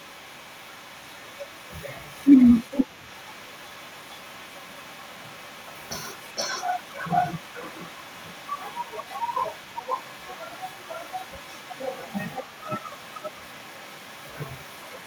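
From the start to the end of the speech, a faint second copy of the voice trails the original by about 470 ms, sitting roughly 20 dB below it. This is an echo leak, likely from a far end on loudspeaker whose echo canceller let part of its microphone pickup return down the line. Room reverberation would be a smooth decay fused to each syllable. Here the repeat is a separate, delayed copy arriving after a clear gap.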